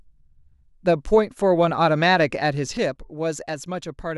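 Speech, with one channel dropping out from 2.77 s to the end of the clip at 4.17 s. At 2.77 s the level falls abruptly by about 6 dB and stays there, with no fade. That step is what a mono fold-down gives when one side of a stereo pair goes silent and only half of the shared signal remains, so the likely cause is a lost channel upstream of the sum.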